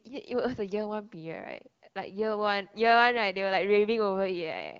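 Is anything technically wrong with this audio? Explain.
No, nothing technically wrong.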